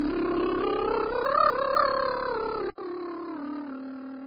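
From the very start, the music sounds smeared and watery, with two kinds of compression artefacts stacked on each other and nothing at all above 5 kHz. The most likely cause is transcoding between lossy codecs. The texture suggests a low-rate AAC-LC pass at around 16 kbit/s, then a Vorbis re-encode at roughly 22.7 kbit/s. The Vorbis stage has wasted its bits re-coding the AAC damage and added its own swirly artefacts, and the 5 kHz ceiling, the lowest cut-off in the chain, never came back.

Between 1.25 and 1.75 s there's a clear case of chunks out of order. It sounds like 250 ms blocks, with one block landing a chunk late, so two quarter-second pieces play swapped. Nothing goes missing, but the music jumps forward, then back, then forward again. You hear a short jumbled stumble across the three joins.

At 2.7 s the sound drops out for about 80 ms. From there to the end it comes back roughly 10 dB quieter and duller, with nothing above 5.6 kHz and a new noise floor sitting around 50 dB below the music. 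That's the signature of an input switched to a poorer device. It was most likely a change to a narrower-band microphone or headset profile mid-recording, which explains the gap, the tone change and the level drop all at once.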